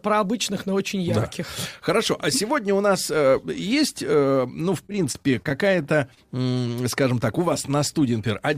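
Right after "есть э ну в", from 4.83 to 6.19 s, there's repeated packet loss giving that robotic sound: eleven tiny holes, none longer than 27 ms, each papered over by stretching the previous sound, so the speech turns choppy and robotic until "э скажем так у".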